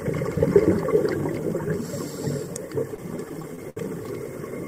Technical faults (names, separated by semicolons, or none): repeated stalls (stutter)